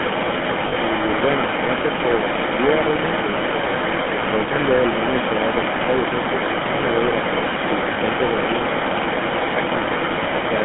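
Speech over a phone line, and it's in rough shape the whole way through. Overdone noise removal has pulled the background down with little twinkling specks, and the quieter parts of the voice got cut along with the noise bands. On top of that you get the GSM full-rate codec's buzzy, gravelly roughness, plainly audible, in a band of about 150 Hz to 3.4 kHz, which fits the 13 kbps first-generation GSM coder with its pulse-driven vocal tract model. Across the entire 11 seconds there's also an echo leak: a copy of the voice trails the original by 395 ms at roughly the same level. That's most likely a far end on speakerphone whose echo canceller let its own pickup back into the line. Finally there are lost GSM frames, where the decoder held the last good frame and the sound turns into a brief rough, metallic ring. The first runs from 0.68 to 0.73 s, fitting two dropped frames, and the second from 7.94 to 7.98 s, fitting one. 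The call microphone processing's bass cut is there too, but that's just normal behaviour.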